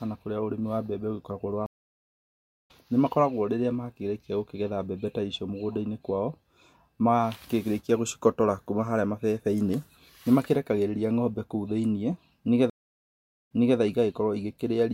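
At 1.66 s the speech drops out for about 1.03 s, and when it comes back at 2.71 s it has jumped ahead by roughly a second. That's a classic stream reconnect: the connection broke, the player went quiet, then restarted its decoder mid-stream. It happens again at 12.70 s, with about 0.80 s of silence, but this time the audio resumes about 0.29 s earlier, so a short stretch repeats before 13.79 s.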